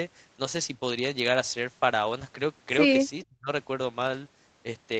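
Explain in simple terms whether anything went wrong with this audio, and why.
One thing went wrong, and it looks like speech suppressed in double talk. The call's echo canceller likely heard both sides talking at the same moment. It couldn't tell the talker apart from the echo of the other side coming out of the loudspeaker, so it turned everything down. The result is a sudden hole in the speech from 3.23 to 3.48 seconds. The voice drops to almost nothing for about a third of a second, then returns.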